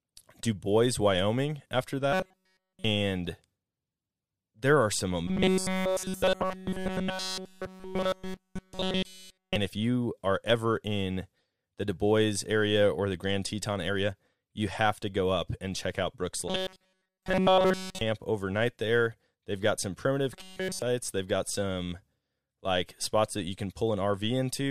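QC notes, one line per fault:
2.12–2.85 s, 5.28–9.56 s, 16.48–18.01 s, 20.33–20.82 s: robotic sound from repeated short buffers. The speech turns into a rigid 188 Hz metallic buzz that follows it only roughly, likely from a roughly 5 ms buffer being looped while new audio is missing. The buzz repeats at a fixed rate, which distinguishes it from codec warble.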